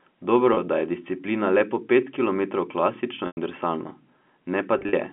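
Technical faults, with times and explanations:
0.54 s, 3.27 s to 3.37 s and 4.79 s to 4.93 s, packet loss with pitch repetition: the sound briefly holds and turns buzzy for 30 ms at 0.54 s, fades toward silence over a 100 ms gap at 3.27 s, and stutters through 80 ms of scattered dropouts across 140 ms at 4.79 s, the longest lasting 40 ms. The receiver bridged each hole by repeating the last pitch period and fading it, which fits runs of roughly 10 ms packets lost on the 200 Hz to 3.4 kHz telephone line.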